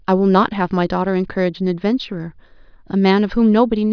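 Nothing goes wrong anywhere in this bit of speech, so there's no fault to walk through.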